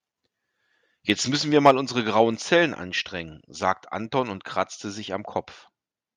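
A speech recording with two linked faults. From 1.56 to 1.71 s there is microphone overload: the loudest part of the speech turns harsh and crackly, with a gritty, flattened edge instead of a clean peak. The input was driven roughly 5 dB past what the converter could represent, so around 3 percent of the samples in that stretch have their tops sheared off. The likely cause is the microphone input volume set too high for how loudly the talker was speaking. At 1.71 s, immediately after that distorted burst, the microphone volume is stepped down: speech and background both drop abruptly by about 3 dB, and the change comes as a single step with no fade. The likely cause is the call software detecting the clipping and cutting the device's input volume in one step to stop it recurring.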